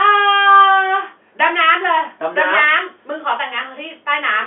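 No technical faults detected.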